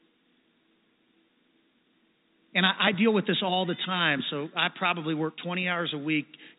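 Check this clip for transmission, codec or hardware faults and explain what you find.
The speech arrives intact through a narrowband call path, with no content above 4 kHz, as expected of a G.711 A-law codec, and nothing in the signal departs from that path's normal character.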